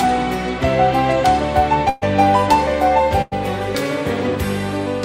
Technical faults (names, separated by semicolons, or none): burst of packet loss